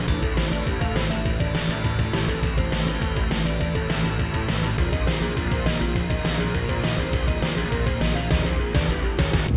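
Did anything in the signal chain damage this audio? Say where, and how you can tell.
No damaging fault heard anywhere.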